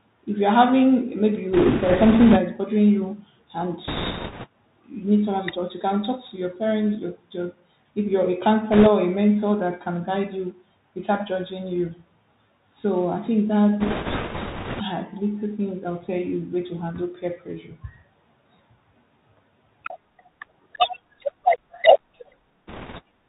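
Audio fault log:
throughout: Bluetooth CVSD headset codec. Speech is squeezed into a one-bit-per-sample 64 kbps stream. Nothing above 4 kHz survives, a granular hiss sits underneath, and loud sibilants turn scratchy.
1.53–2.38 s, 3.88–4.46 s, 8.72–8.88 s, 13.8–14.82 s, 22.67–23.01 s: bit errors on a Bluetooth voice link. The first burst runs from "you're having maybe" to "is bothering you and", the second follows "is bothering you and", and the fourth follows "I think". Each brings a rushing crackle without hard clicks, because every flipped bit nudges the signal only slightly. The error rate is around 5 percent, rising to about 7 percent in the fourth, which sounds roughest.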